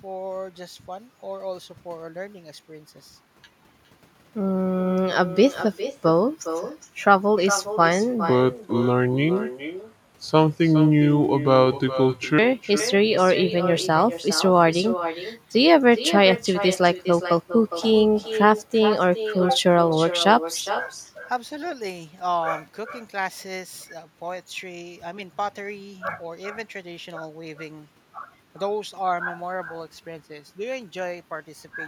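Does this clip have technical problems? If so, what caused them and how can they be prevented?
Yes. Throughout the speech there is echo with no canceller: a quieter, thinner copy trails each phrase by roughly 0.4 s at about 11 dB below the direct sound. The far end's loudspeaker output is reaching its microphone and returning unremoved. Enabling acoustic echo cancellation at that end, or having it use a headset, prevents this.

From 8.30 s to 12.39 s there is a section at the wrong speed, played at 0.73 times the original rate. The speech turns slow and deep, roughly five semitones lower, likely because that stretch was resampled or clocked against the wrong rate during editing or playback. Keeping sample rates consistent through the editing and playback chain prevents this.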